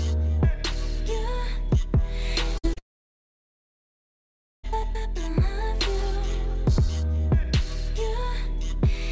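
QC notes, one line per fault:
2.58–2.65 s, burst of packet loss: The sound briefly freezes into a held buzz or fading hiss, then jumps ahead. Several packets in a row were lost, so the receiver stretched the last audio for about 55 ms and then resumed roughly 60 ms further on, skipping what lay between.
2.73–2.78 s, short concealed packet loss: A brief smear or wobble. About 40 ms failed to arrive in time, and the receiver patched roughly 30 ms of it by extending the preceding sound before blending back into the real signal.
2.78–4.65 s, long network dropout: The sound trails off into a short fading buzz or hiss, then nearly two seconds of silence (about 1.82 s) before audio returns with material missing. The likely cause is that nothing arrived for around 1.86 s, so concealment quickly gave out and silence filled the gap.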